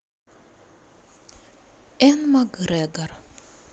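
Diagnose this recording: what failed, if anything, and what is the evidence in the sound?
Nothing failed here, since the speech comes through the call path with no audible fault at any stage.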